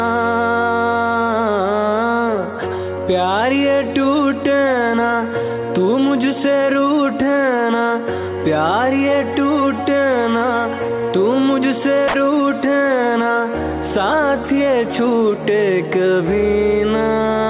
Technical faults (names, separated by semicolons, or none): sound dropped by the voice detector